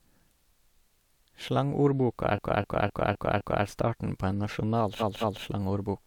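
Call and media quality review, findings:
Repeated frames, 2.35–3.63 s, just before "er starten": one 256 ms stretch of speech stutters, played five extra times, adding 1.28 s. The same compressed block was likely resent or rewritten, and the decoder replayed it each time.

Repeated frames, 4.99–5.42 s: a 213 ms block plays twice more, adding 0.43 s. Same duplication mechanism, in the encoder output or transport stage.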